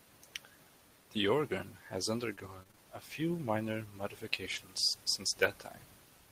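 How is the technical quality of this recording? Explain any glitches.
The recording has one glitch. Repeated packet loss (robotic sound) runs from 2.35 to 2.80 s, between "organ has" and "a few minor". Short holes, the longest 22 ms, were patched by repeating preceding audio, making it choppy. A spectrogram shows smeared, striped fragments.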